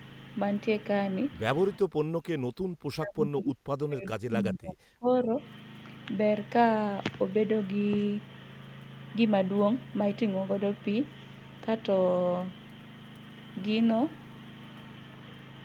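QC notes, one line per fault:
1.79–5.29 s: speech suppressed in double talk. The speech sinks sharply, at its deepest by around 40 dB, and drops out in pieces for about three seconds in total. This is likely an echo canceller that mistook near-end speech for loudspeaker echo while both ends talked, and attenuated both.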